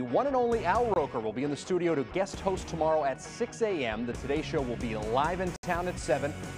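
A brief gap at 0.94 s and a short hole from 5.56 to 5.63 s are two blocks of digital silence. The sound drops straight to silence and returns with no fade. The first gap lasts about 21 ms, which fits one unfilled 1024-sample buffer. The second runs about 70 ms, long enough to be heard as a hole rather than a tick.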